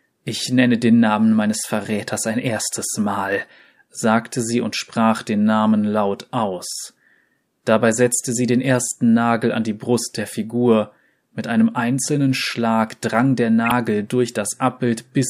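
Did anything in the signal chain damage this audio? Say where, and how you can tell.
Yes: the codec decoded corrupt frames with flipped bits, misplacing energy. This gives a blip at 8.79 s and a louder burst from 13.65 to 13.72 s.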